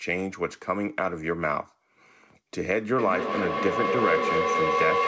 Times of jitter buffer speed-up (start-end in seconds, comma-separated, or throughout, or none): none